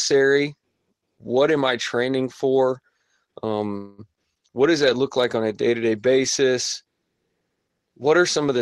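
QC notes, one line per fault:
3.77–4.00 s, call audio freeze: the sound smears into a fading buzzy hold for about 210 ms, then resumes at "what does that look" with nothing dropped, just arriving late. Likely packets got held up and the jitter buffer ran dry.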